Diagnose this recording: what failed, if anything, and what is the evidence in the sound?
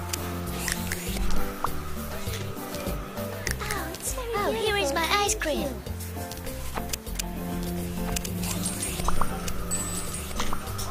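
Doubled audio track from 7.45 s to the end: a dry full-band copy, about 5 dB quieter, trails by roughly one and a half seconds, likely from a second, slower capture path.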